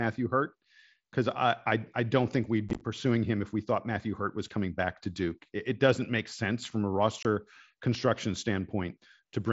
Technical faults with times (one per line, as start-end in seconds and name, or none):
2.69-2.81 unconcealed Bluetooth headset packet loss
7.23-7.25 unconcealed Bluetooth headset packet loss